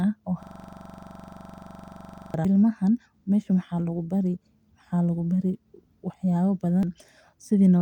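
A short fragment of this speech recording repeats as a steady, buzzing stutter from 0.43 to 2.34 s. A system hang loop is replaying one 42.67 ms piece about 81 times at 23.4 Hz, which fits a 2048-sample buffer. Brief glitches at 0.62 s, 2.45 to 2.48 s and 6.83 to 6.86 s are damaged data in a compressed stream, where the decoder loses frame sync and jumps to the next header.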